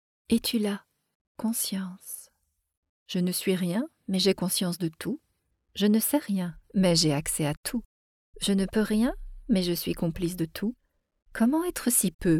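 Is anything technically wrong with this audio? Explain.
Yes. At 11.69 s there is a single sharp click from dropped samples. Likely about one sample went missing from the stream. The waveform then jumps straight to a later value. Nothing audible is lost, but the step sounds as a brief tick.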